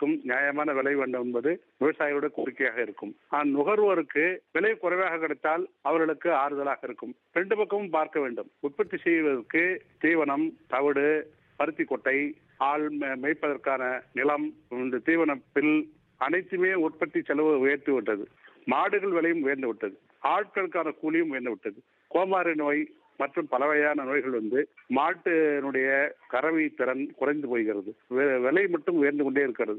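Nothing in this audio stands out as a technical fault; it just runs along without any problems that a listener would pick up on.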